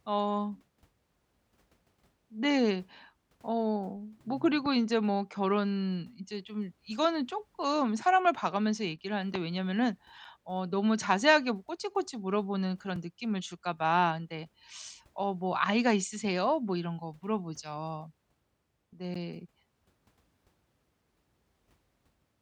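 From 8.96 to 9.04 s, one channel drops out. The speech falls abruptly by about 6 dB. A lost stereo channel is the likely cause.

Blocks of digital silence hit at 10.25, 12.96 and 19.14 s, lasting 6.4, 3.8 and 11.6 ms. Samples became zeros with no fade, so each is heard as a tick or dip. The longest fits a 512-sample buffer.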